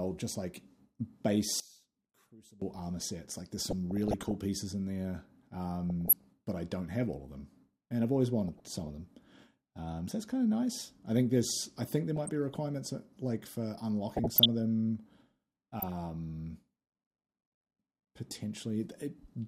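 From 1.6 to 2.62 s, the sound likely suffers from one channel inverted: reversed polarity cancels the shared centre in mono, dropping the level by about 23 dB to a faint residue. DAB burbling follows at 3.59 to 4.35 s, 5.9 to 6.24 s, 8.48 to 8.89 s, 12.16 to 12.55 s, 14.16 to 14.46 s and 15.8 to 15.92 s. Weak reception lets a fraction of a percent of bit errors corrupt the audio frames, causing short blips of noise and sub-bands jumping in level.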